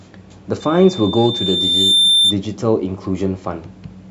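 A piercing tone near 3.6 kHz swells over roughly a second and a half, from 0.60 s to 2.38 s, and peaks a few decibels above the speech. This is loudspeaker feedback squeal: the microphone re-amplifies its own loudspeaker until that frequency runs away.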